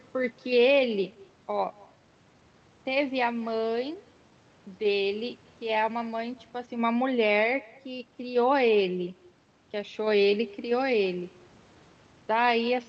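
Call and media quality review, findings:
Echo with no canceller, whole clip: faint, thin copy of the speech trailing each phrase by around a fifth of a second, about 26 dB down. Far-end loudspeaker into microphone, no cancellation. Distinct from room reverb: a discrete, delayed repeat, not a smooth tail.

Clock drift between sender and receiver, whole clip: sender clock running roughly five percent fast, so the jitter buffer keeps overfilling. Unlike random network jitter, the disturbance is steady in one direction and never lets up. Coding noise with a ceiling near 8 kHz suggests the usual Opus path.

Repeated timing corrections, 0.13 to 12.80 s: small, unevenly spaced hiccups and a slightly unsteady tempo, net speed 105%. Receiver keeps trimming short pieces to catch up. Unlike packet-loss dropouts, there are no gaps or concealment smears, only cut joins.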